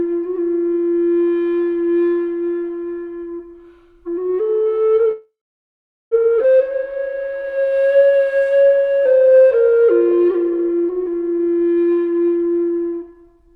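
From 5.11 to 6.14 s there is a call audio freeze. The last sound stretches into a fading buzz and then about 0.79 s of silence, most likely because packets stalled and the jitter buffer ran dry. On a spectrogram, smeared horizontal bands decay into a blank column. Nothing is lost, but about 1 s of delay has been added.

At 6.43 to 6.47 s comes a skip ahead. Roughly 0.7 s of audio is gone, with only a few milliseconds of fill at the splice, so the sound lurches forward. The waveform shows an abrupt join where the envelope and spectral content change with no transition.

From 6.69 to 11.28 s a jitter buffer slow-down plays the audio at 87% speed with unchanged pitch. Repeated pitch periods add 621 ms to rebuild the buffer's reserve. The result is drawn-out sounds. On a spectrogram, harmonics stay level while events spread wider in time.

From 11.30 to 13.51 s a jitter buffer speed-up runs at 137% speed. 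Roughly 0.7 s of short pitch-period pieces are cut out to shrink the excess delay. The audio sounds hurried at the same pitch. Its spectrogram shows events compressed closer together.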